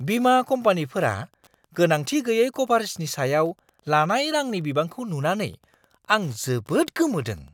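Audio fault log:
throughout, Wi-Fi interference: a nearby Wi-Fi radio's beacon transmissions are being picked up by the audio circuitry and rectified, so each radio burst becomes a small click in the signal. The beacon repeats every 102.4 ms, which gives the speech an even, machine-regular ticking at just under ten per second. It sits around 40 dB below the speech, faint but constant, and is easiest to hear in the gaps between phrases.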